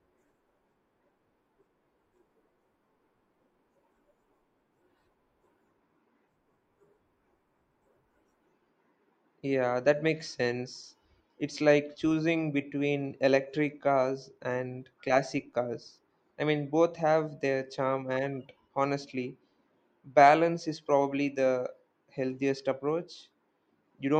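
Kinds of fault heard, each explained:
No audible technical faults can be heard here.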